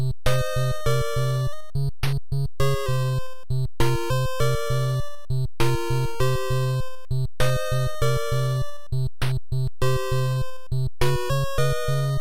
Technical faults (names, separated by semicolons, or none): drift correction step